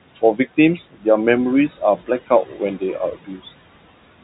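Noise suppressor artifacts run through the whole clip. The suppressor keeps judging which bands hold steady room noise and pulling them down by about 17 dB, frame by frame. The room noise, which sits only about 18 dB under the speech, ducks in the gaps and comes back up underneath the talking. The telephone band stops around 3.8 kHz.

Then there are three spots where the suppressor mistakes the speech itself for noise: 0.77 to 1.06 s, 2.26 to 2.61 s, and 3.0 to 3.4 s. In each stretch, something like a sixth of a second of soft consonants or word endings gets pushed down along with the background. The deepest drop is about 18 dB in the first spot and about 15 dB in the other two. Those bits come across swallowed, as if the talker briefly mumbled or turned away.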